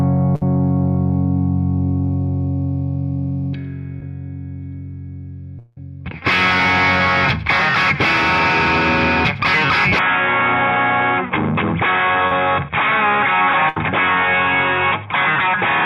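Packets went missing in a short burst at 0.35–0.42 s and again at 13.69–13.77 s, a burst of packet loss each time. The receiver carried the last sound forward and let it fade, so the first gap becomes a held buzz or hiss of about 60 ms that covers 60 ms of missing audio. The second stretches about 73 ms over 80 ms that never arrive, and the sound then resumes slightly further along.

Short concealed packet loss appears at 4.00 s and again at 12.27–12.32 s. The first is a hole of about 10 ms that the decoder patches with a few milliseconds of extrapolated sound, heard as a tiny smear. The second loses about 30 ms and bridges it with roughly 33 ms of synthesized continuation blended back into the real signal, giving a brief wobble in which a short sound can go missing.

From 5.59 to 5.77 s the sound turns into a fading buzz or hiss of about 175 ms, standing in for roughly 170 ms that is gone, with no silent stretch before the audio picks up again further on. 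That pattern most plausibly comes from a long network dropout, caught before it went quiet.

At 9.99 s, with no gap at the join and little change in loudness, the audio abruptly loses everything above 3.8 kHz and stays that way to the end, turning duller and boxier. A faint new background noise also appears, well below the signal. This is likely the input switched to a poorer device, such as a headset falling back to its narrower call profile.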